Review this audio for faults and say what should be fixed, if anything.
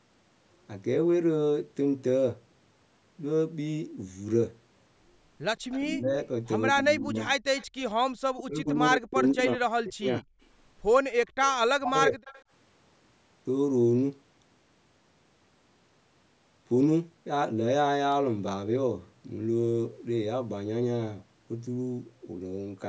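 Echo leak: faint delayed copies of the speech surface at 5.71–5.80 s, 7.57–7.93 s and 12.25–12.43 s, lagging by 169 ms and sitting about 20 to 25 dB below the main talker. The likely cause is a loudspeaker echo canceller letting residue through. The fixed lag separates it from room reverberation, which smears continuously rather than repeating at one delay. Better echo-path adaptation, or a headset on the far side, would prevent it.

Speech suppressed in double talk: the talker dips at 5.83–6.16 s and 6.75–7.28 s by about 15 dB, then drops out far more deeply, around 40 dB, at 8.37–10.24 s and 11.70–12.21 s. This is likely the canceller ducking both voices during overlap. Unlike packet-loss dropouts, it happens only while both sides are talking. A canceller tuned to detect double talk would prevent it.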